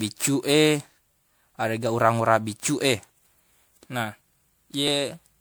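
Generation loss runs through the whole of this speech clip: the sound is swirly, smeared and hollow, with softened consonant attacks. This points to MP3 at around 128 kbit/s that was likely decoded and re-encoded roughly seven times. Each new pass quantises again on a shifted frame grid, so the noise and spectral gaps pile up beyond what a single encode at that rate would leave. A dropped buffer (overrun) is heard at 3.35 s and again at 4.88 s as a sudden jump forward in the sound with no gap of silence. The first skips about 10 ms and the second about 15 ms. The likely cause is that the capture side failed to read its samples before the hardware overwrote them, so the audio on either side of each lost piece is butted together directly.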